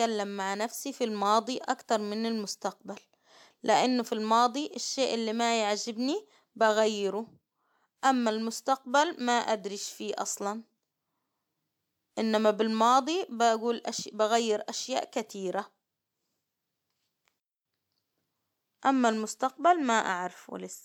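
No technical faults can be heard anywhere in this recording.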